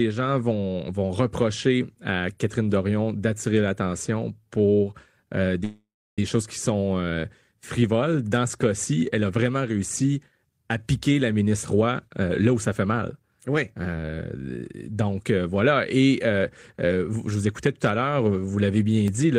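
After "d'attirer l'attention pour euh", from 5.64 to 6.19 s, the last sound stretches into a fading buzz, then about 310 ms of silence, before "choses qui sont euh" resumes intact. This call audio freeze likely comes from delayed packets draining the jitter buffer. From 11.46 to 14.37 s, after "réussi à piquer la", and again from 17.12 to 17.69 s, before "tout à", the speech sounds hurried at unchanged pitch, running at 108% and 109%. This jitter buffer speed-up trims repeated pitch-period slices to shed excess delay, roughly a third of a second in the first stretch and a few tens of milliseconds in the second.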